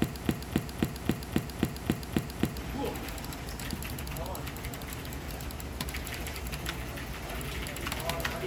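From the very start until about 2.58 s, the audio is caught in a broken-record loop: a 0.27 s fragment plays back to back, nine times in a row, already under way when the clip begins. The likely cause is a player, encoder or stream that stalled and kept resending its last held piece, so whatever should have sounded there is gone. Unlike an echo, each pass is identical in level and detail, with no decay.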